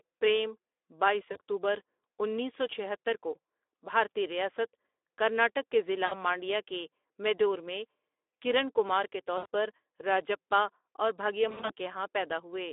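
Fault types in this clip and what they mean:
Speex codec: low-rate CELP speech coding, consistent with about 11 kbps, on a 300 Hz to 3.6 kHz band, leaving the speech audibly hoarse and noisy throughout.
VoIP packet loss concealment by the speech codec: the decoder extrapolates over dropouts of 40 to 120 ms at 1.31, 6.05, 9.37 and 11.49 s, producing short fading smears.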